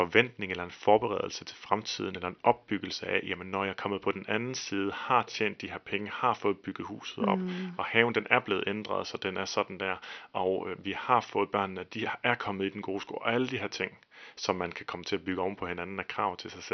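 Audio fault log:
No faults found in this speech clip; the only background is room noise in the recording space, sitting about 44 dB below the speech.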